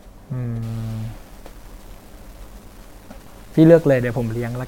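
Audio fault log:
0.63–4.67 s, stuck bit: from 0.63 s to the end, the speech takes on a harsh, buzzy distortion, and the gaps between phrases fill with a steady noise floor at around -40 dBFS rather than falling silent. The likely cause is one data bit held at a fixed value by a broken line or converter, offsetting about half the samples by that bit's weight and flipping with the sign of quiet signal, so even pauses carry noise.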